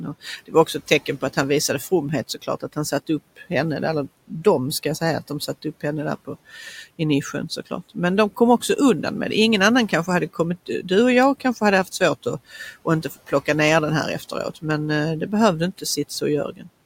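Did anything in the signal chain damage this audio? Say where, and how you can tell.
Yes, in call processing. Speech is cut by the noise suppressor at 0.23–1.37 s (before "han visade"), 1.91–3.51 s, 4.28–6.29 s (after "där eller"), 9.89–13.48 s and 15.78–16.68 s (after "eh det behövde"). Short stretches, a fraction of a second each, sink by about 13 to 17 dB and take the room noise down with them. That shows the suppressor mistaking quiet speech for noise, not a dropout, which would fall to true silence.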